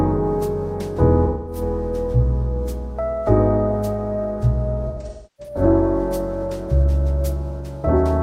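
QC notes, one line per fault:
1.25–1.61 s: AAC frame loss with concealment. About 213 ms of audio is missing, which points to roughly five lost frames. The decoder patches the gap from the last good spectrum, so it sounds smeared and noisy. On a spectrogram this shows as a blurred, frozen block. On the waveform the envelope flattens into noise-like fill.
4.87–5.62 s: AAC frame loss with concealment, in scattered runs. About 469 ms is lost across roughly 600 ms, and the longest gap is around 0.3 s, which points to about eleven lost frames. Repeated spectral reuse makes the passage sound patchy and phasey. A spectrogram shows several smeared blocks between stretches of intact detail.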